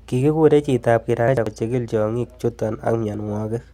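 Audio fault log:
1.19–1.47 s, compressed frames skipped: the speech lurches forward as a run of coded frames goes missing, either absent from the stream or rejected by the decoder as corrupt, so about a third of a second of audio is never played. What follows arrives early, with no gap.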